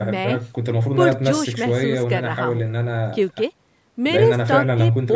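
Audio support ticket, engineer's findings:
Speech signal shows normal call microphone processing, with content reaching up to 8 kHz and the lowest bass removed by the expected high-pass filter, and no faults found.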